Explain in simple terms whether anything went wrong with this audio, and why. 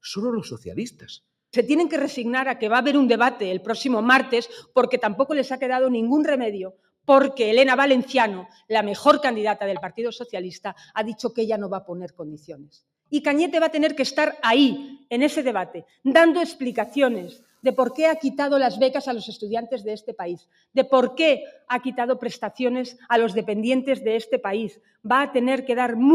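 Yes. The sound is wrongly cut by the noise suppressor at 6.72, 8.48, 12.38, 17.37, 20.39 and 24.73 seconds. It sinks in level for a moment, unlike a dropout, which goes fully silent. From 16.70 to 18.20 seconds, a distortion follows the sound. This is likely low bit depth without dither, which fits rough 8-bit truncation.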